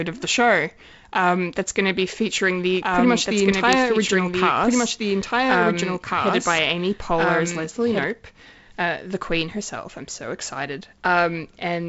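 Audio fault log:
2.82–8.04 s, doubled audio track: just after "to be featuring the", a dry full-band copy of the speech trails about a second and a half behind, some 5 dB quieter, cutting in and out abruptly, likely from a slower second capture path.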